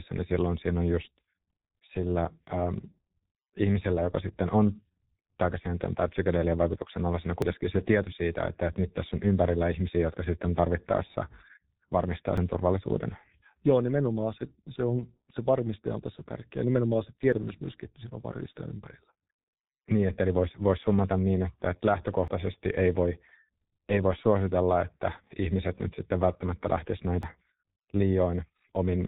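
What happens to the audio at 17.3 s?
At 17.33 s a chunk boundary, likely every 5 s, drops roughly 50 ms of audio between chunks. The two sides butt together as a skip, seen as an abrupt waveform discontinuity with no silent gap.

This moment also carries the G.723.1 codec's heavy damage: at 6.3 kbit/s it cuts everything above 3.8 kHz, so the speech is muffled and hoarse and the spectrogram is blank above that line.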